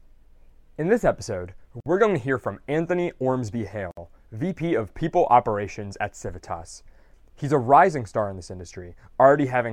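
At 1.80 s and again at 3.91 s the speech drops into silence for about 56 ms and 62 ms, a gap at a join of encoded pieces: separately encoded segments were butted together untrimmed, leaving encoder delay and last-frame padding. Each dropout has smeared edges before the speech resumes where it stopped.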